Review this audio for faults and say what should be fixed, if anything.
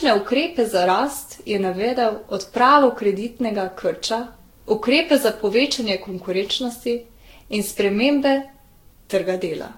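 Generation loss throughout: repeated lossy re-encoding, likely about ten Vorbis-like passes near 62 kbit/s, has left the speech swirly, hollow and smeared, with nothing above 16.6 kHz. Keep one lossless master and encode to a lossy format only once, at final delivery.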